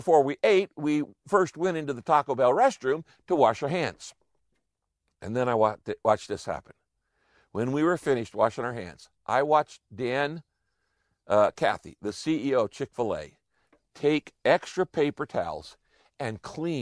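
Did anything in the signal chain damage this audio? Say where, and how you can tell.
No, no damage anywhere.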